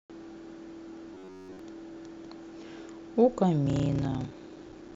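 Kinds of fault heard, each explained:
Robotic sound from repeated short buffers: From 1.15 to 1.59 s the sound becomes a rigid, metallic buzz locked near 93.8 Hz, likely from a roughly 10.7 ms stretch being replayed over and over while new audio is missing. A spectrogram shows evenly spaced horizontal harmonic lines, and the waveform shows a repeating identical shape.
Block size mismatch (padded): From 3.64 s to the end, every block is followed by a stretch of silence, which fits 512-sample reads being fed shorter writes. This produces a 31.2 Hz buzz and slows the sound to 0.861 times its normal speed at about normal pitch. The waveform shows regular near-silent gaps, and the spectrogram shows thin vertical stripes.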